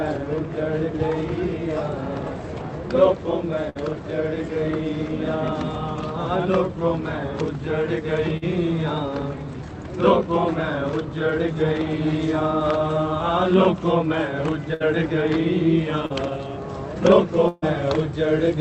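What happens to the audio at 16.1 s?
Around 16.06 to 16.12 s there's a short concealed packet loss: roughly 40 ms never arrived, so the receiver stretched the preceding sound over the gap, leaving a brief smear.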